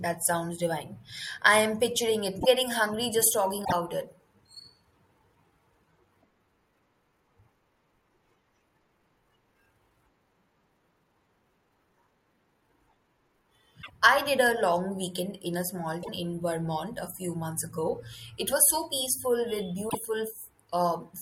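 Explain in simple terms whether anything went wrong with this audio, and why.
Five short glitches break into the speech from damaged data in a compressed stream. Corrupted bytes make the decoder lose its place and skip ahead, which is heard as a chirp, squawk, click or short hole. They occur at 2.37–2.46 s (between "i am picturing it" and "getting hungry"), 3.61–3.73 s, 13.79–13.90 s (just before "I did a long"), 16.00–16.09 s (right after "weekend in a small") and 19.86–19.95 s.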